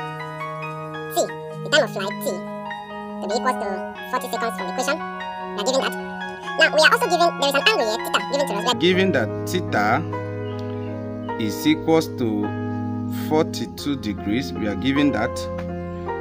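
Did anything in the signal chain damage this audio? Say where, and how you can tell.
Yes. From 0.00 to 8.73 s the audio was read two samples at a time (double speed), a sample-format conversion error: pairs were taken as one frame, so everything plays 2x fast and 12 semitones high. A spectrogram shows content shifted up an octave; the waveform looks time-compressed.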